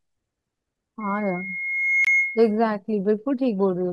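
At 1.00 s a loudspeaker feedback squeal begins: the microphone is picking up the loudspeaker it feeds, and the loop gain passes one at 2.2 kHz. That tone swells over about a second to sit roughly 5 dB above the speech, then stops at 2.59 s.

From 2.05 to 2.08 s the output drops to silence, then resumes as though it had played on. This is likely a Bluetooth dropout, where late packets were discarded. The gap fits a single lost frame of about 23 ms.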